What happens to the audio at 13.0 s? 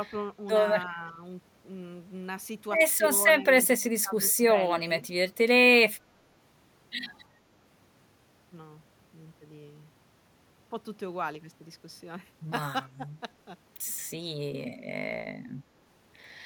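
The speech briefly dips by roughly 10 dB from 12.97 to 13.09 s, a short dip of about a tenth of a second. This is speech suppressed in double talk, likely an echo canceller that could not separate the talker from overlapping far-end echo and attenuated the talker too.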